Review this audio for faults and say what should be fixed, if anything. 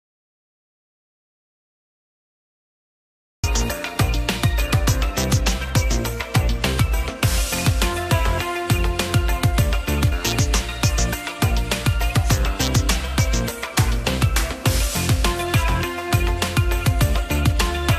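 Audio dropout to silence from 0.00 to 3.44 s. The clip opens already in silence, with no room tone at all. Sound then starts abruptly mid-flow. The input was likely lost while the recorder kept writing silence. Check connections and mute states before recording starts.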